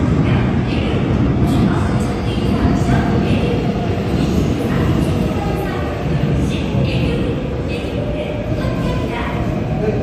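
The first 2.0 s come from an adaptive stream starting at a low bitrate. The player began on a cheap version of the stream to start quickly. Nothing sits above 12.3 kHz there. The top end sounds thin and partly synthetic, and codec artefacts are strong. The sound fits HE-AAC at about 16 kbit/s. At 2.0 s the player has measured the connection and switches up. Quality jumps at once, with no gap. The new sound fits AAC-LC at about 96 kbit/s.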